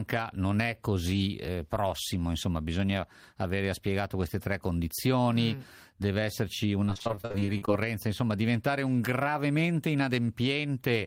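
Speech, with repeated packet loss (robotic sound) from 6.85 to 7.69 s, between "condizioni mm deve esserci" and "insomma diventare un gravemente". About a dozen holes, the longest 42 ms, are filled by stretching earlier sound, leaving it choppy with pieces missing. A spectrogram shows smeared, blocky harmonics with abrupt seams, and the waveform shows short repeated cycles.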